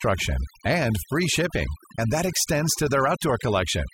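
Overdone noise removal runs through the whole speech clip: frequency bands near the estimated noise are pulled down or off, so the background drops away and breaks into twinkling, warbling specks. Unlike a noise gate, which mutes everything at once, this works band by band.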